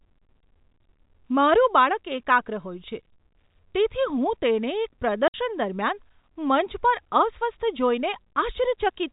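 Speech over what sounds like a narrowband telephone path. At 5.28 to 5.34 s there's packet loss filled with silence: a hard-edged 60 ms hole, which fits two lost 30 ms packets.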